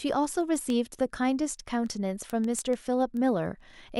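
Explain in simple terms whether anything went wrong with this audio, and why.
Sharp ticks run through the speech from 0.12 s to 3.90 s, around thirty of them, roughly six or seven each second and not all equally loud. These are word clock ticks. The receiving device kept its own time instead of following the sender's, so every time the two clocks drifted a full sample apart, one sample was lost or doubled. The steady rhythm, rather than random crackle or actual gaps in the sound, is what gives it away.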